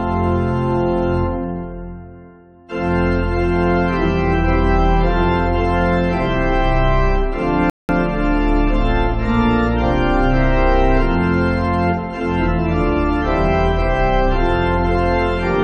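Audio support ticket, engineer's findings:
Rebuffering stall at 7.70 to 7.89 s. Playback drops to silence for about 190 ms, then picks up exactly where it stopped. Nothing is skipped; the gap only adds time. Probable component: the player's download buffer. Mechanism: the buffer emptied before more data arrived, so output paused until delivery caught up.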